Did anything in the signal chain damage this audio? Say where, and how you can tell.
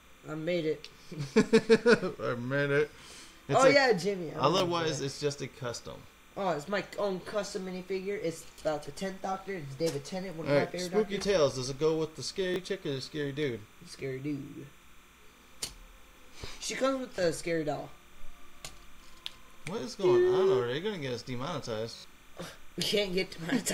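Yes. Two stages left their mark.

Timecode bleed from the analogue wiring sits under the whole clip: a steady chirping warble that flips between two tones an octave apart, around 1 kHz and 2 kHz, at roughly 30 dB below the sound. Its fixed rhythm fits 29.97-frame linear timecode leaking from a neighbouring track or cable. Mains hum would be a low buzz, and random interference would not alternate cleanly between two octave-related pitches as this does.

A repeated buffer at the driver or buffer stage causes stutters at 4.58–4.60, 8.54–8.58, 12.54–12.56, 17.16–17.18 and 21.96–22.04 s. The same short slice replays with a hard join, once at most points, twice at 8.54 s and four times at 21.96 s, which fits a 20 ms buffer. When new audio arrived late, the device played the old buffer again instead of falling silent. That repeated content is what separates it from a dropout.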